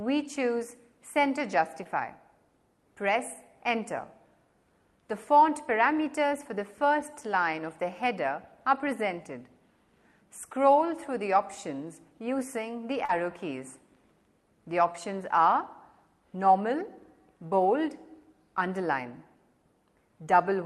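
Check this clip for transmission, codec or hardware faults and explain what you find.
Three brief dropouts were found, all short concealed packet loss, at 1.83 to 1.87 s, 13.05 to 13.1 s and 14.93 to 14.96 s. Each is a quick smear where the sound briefly wobbles. Roughly 20, 40 and 20 ms of audio never arrived. The receiver extended the preceding sound to bridge each gap, then crossfaded back into the real signal. The highs are cut above about 12 kHz by the call codec in the path.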